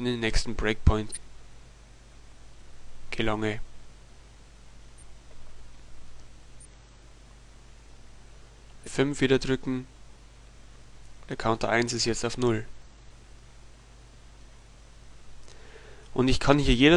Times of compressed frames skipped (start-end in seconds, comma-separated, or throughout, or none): 1.12-1.18, 6.55-6.66, 8.73-8.88, 12.73-12.87